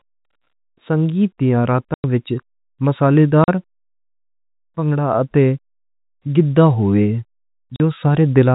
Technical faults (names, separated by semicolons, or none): packet loss filled with silence